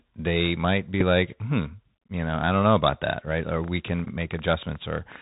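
Bluetooth CVSD headset codec damage runs through the whole speech clip. The band stops at 4 kHz, so the sound is narrow and dull. The one-bit encoder's step size cannot keep up with loud high-frequency energy, which makes s sounds scratchy and leaves a granular hiss underneath. This fits the 64 kbps CVSD headset link.

At 1.01 s a Bluetooth headset packet is repeated. About 3.8 ms of audio went missing, which fits one lost packet, and the decoder played the previous packet's bits again in its place. The result is a single small tick.

From 3.64 s to 5.17 s a train of clicks sits over the sound. There are roughly fifteen of them, arriving at about 9 per second with irregular spacing. Their peaks are around the level of the speech, and they are likely caused by interference or a faulty connection or power supply.

From 4.05 s to 4.08 s, inside that click train, another Bluetooth headset packet repeat occurs. 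About 11.2 ms was lost, which points to three consecutive packets. The repeated 3.75 ms block produces a brief buzz near 267 Hz.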